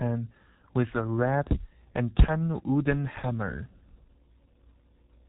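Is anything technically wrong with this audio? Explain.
Yes. G.723.1 codec damage runs throughout the speech: nothing reaches above about 3.9 kHz, and the 30 ms frames with slow voice-model updates, fitting a rate near 6.3 kbit/s, leave heavy muffling, a hoarse buzz and smeared consonants.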